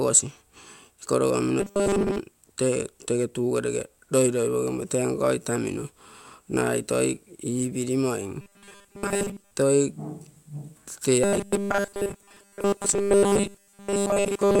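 Speech with robotic sound from repeated short buffers at 1.60 to 2.20 s, 8.41 to 9.51 s, and 11.24 s to the end. A rigid 200 Hz buzz is heard, likely from a starved buffer looping 5 ms segments while most real audio is skipped.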